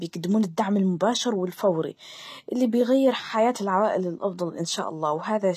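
A speech clip carrying plainly audible HE-AAC compression damage throughout, with nothing above 14.9 kHz. The treble sounds synthesized rather than captured: s sounds turn gritty and metallic where copied upper bands fail to line up with the real harmonics below, which fits a low rate around 24 kbps.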